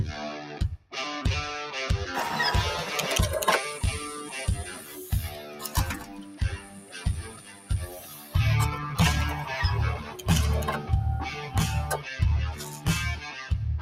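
A noise suppressor applied to sounds runs throughout the clip. Designed for speech, it treats steady, sustained material as noise and pulls it down by up to around 15 dB, letting attacks through while held parts sink, so the audio pumps and thins.

The sound cut by the noise suppressor appears at 0.77–0.94 s (about 15 dB down), 4.64–8.35 s (about 14 dB), 9.98–10.26 s (about 8 dB), 11.3–11.55 s (about 7 dB), 11.98–12.13 s (about 9 dB) and 12.54–13.51 s (about 10 dB). In each stretch, sustained or decaying sound sags and its tail is clipped short.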